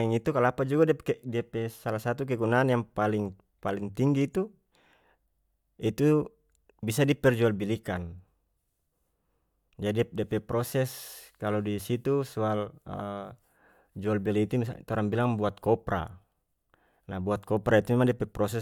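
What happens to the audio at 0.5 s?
At 0.5 s the speech runs on cleanly, with no dropout, click, distortion or other fault to be heard.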